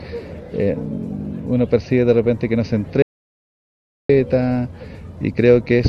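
An audio dropout to silence runs from 3.02 to 4.09 s: the sound cuts off abruptly and about 1.07 s of silence follows, with no room tone. The input was likely lost briefly while recording continued, so that stretch is simply gone.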